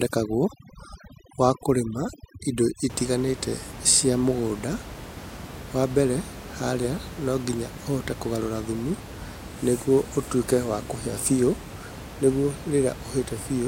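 From the start to about 2.9 s there's overdone noise removal: the denoiser was set so hard that the room noise collapses into twinkly near-silence and quiet parts of the speech drop out with it. After that, the room noise sits about 14 dB under the speech.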